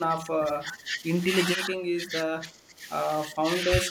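The speech dips sharply from 0 to 1.03 s, 1.56 to 2.86 s, 3.31 to 3.43 s and 3.61 s to the end, by roughly 15 dB, less in the last stretch. This is likely speech suppressed in double talk, an echo canceller ducking its own talker along with the loudspeaker echo during overlapping talk.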